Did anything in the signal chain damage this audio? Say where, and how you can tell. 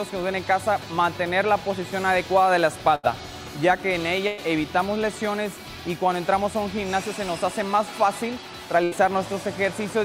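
Yes: a burst of packet loss on the network at 2.95, 4.27 and 8.83 s, where the sound is stretched into a fading tail for 80 to 100 ms, then skips ahead.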